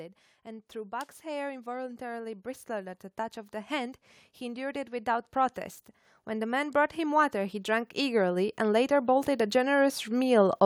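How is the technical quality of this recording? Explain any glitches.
The recording suffers from automatic gain rising, three times. An automatic gain control judged the input too quiet and kept raising its gain: by about 5 dB from 0.43 to 3.05 s, about 3 dB from 3.67 to 5.68 s, and about 10 dB from 6.25 to 10.61 s. Speech and background noise swell together gradually, most noticeably in the last stretch.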